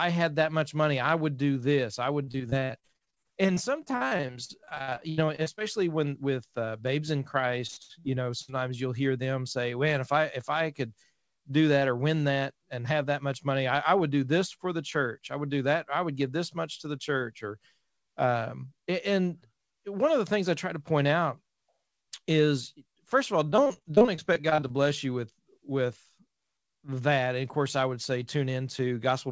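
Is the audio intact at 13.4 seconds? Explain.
Yes, the audio is intact at 13.4 s, with no dropout, glitch or distortion at that point.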